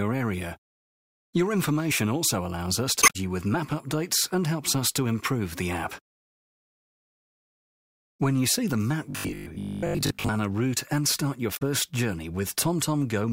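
At 2.99 to 3.16 s and again at 11.53 to 11.62 s, damaged data in the compressed stream makes the decoder lose frame sync, producing a brief glitch.

From 9.11 to 10.29 s the sound turns into a rigid, metallic 50 Hz buzz. This is robotic sound from repeated short buffers, likely caused by a 20 ms chunk being replayed while most of the real audio is skipped.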